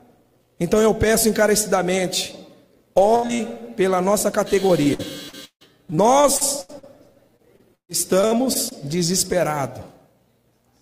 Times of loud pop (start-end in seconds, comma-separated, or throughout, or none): none